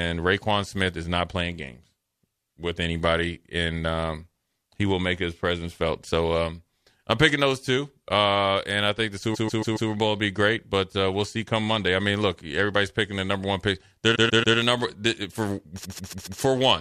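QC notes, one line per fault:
9.34–9.89 s (after "and I think the"), 14.14–14.56 s (before "the number"), 15.84–16.40 s: repeated frames. A 139.3 ms block replays 4, 3 and 4 extra times, stuttering. The spectrogram shows identical tiled patches.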